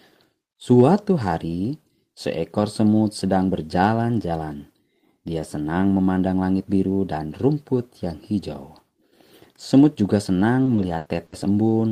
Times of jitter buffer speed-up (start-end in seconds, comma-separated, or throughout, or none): none